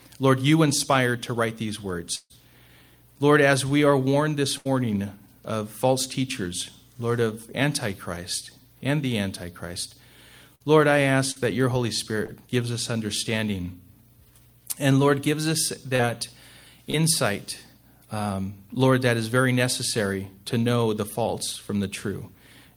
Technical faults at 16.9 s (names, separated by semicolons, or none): short concealed packet loss